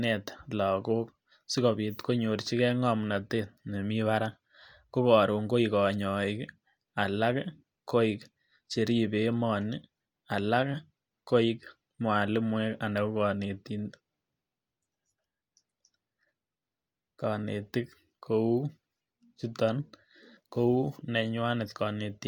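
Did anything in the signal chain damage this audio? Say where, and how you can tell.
No, nothing in the signal chain has audibly damaged this speech recording. No stage, from capture through to playback, leaves a mark I can hear.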